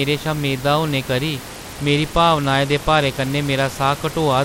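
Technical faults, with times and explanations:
1.47 to 4.44 s, Bluetooth SBC bit pool drop: the speech turns dull and gritty to the end, its treble fading under a grainy haze. The encoder's bit budget fell, fitting a bit pool cut from 31 to 14 (about 99 kbps), which starves the top sub-bands and coarsens the rest.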